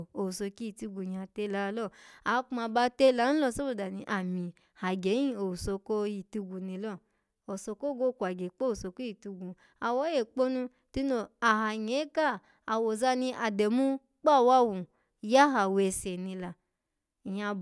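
Speech recording with no audible technical faults.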